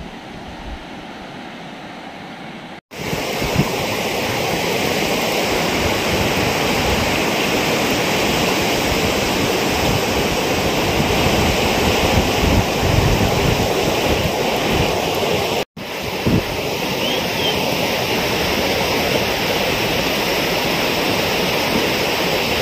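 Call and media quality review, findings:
Doubled audio track, 11.11 s to 14.15 s. A second full-band copy of the audio trails the original by roughly 0.4 s, about 5 dB quieter. There is no decay or room colouring, so it is not reverb or acoustic echo. The copy switches in and out abruptly at both ends. Likely cause: a parallel capture or monitoring path adding a delayed duplicate into the mix, or an edit leaving two offset copies overlapping.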